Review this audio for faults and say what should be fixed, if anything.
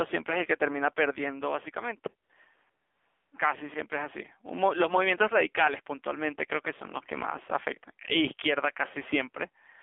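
The AMR narrowband mobile codec affects the whole clip. Nothing passes above 3.5 kHz or below 250 Hz. The speech sounds buzzy and synthetic. The damage is plainly audible, which fits a low rate near 7.4 kbps. Keep the call on a wideband codec or a higher AMR rate.

AMR comfort noise fills two gaps. The first runs from 2.24 to 2.30 s, 60 ms long. The second runs from 2.70 to 3.32 s, lasting 620 ms. Sending stopped, and the real background gave way to smooth synthetic noise that switches in and out. Disable discontinuous transmission or tune voice activity detection to hold speech frames longer.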